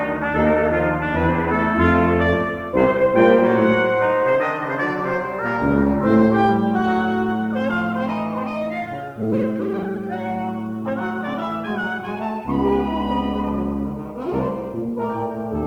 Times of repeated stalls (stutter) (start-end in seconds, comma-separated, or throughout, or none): none